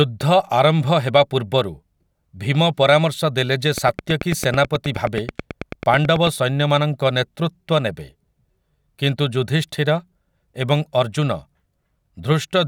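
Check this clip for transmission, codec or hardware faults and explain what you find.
One hardware-type fault turns up, a train of clicks. From 3.78 to 6.28 s, just after "ପରାମର୍ଶ ଦେଲେ ଯେ", something is injecting a short pulse at a steady 9.2 per second, likely interference or a struggling interface. About twenty near-identical clicks, peaking roughly 10 dB above the speech, tick evenly over the talking and through its pauses.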